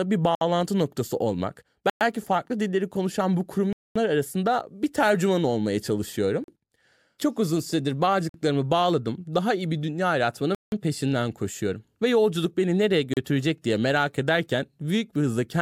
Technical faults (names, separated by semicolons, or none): Bluetooth stall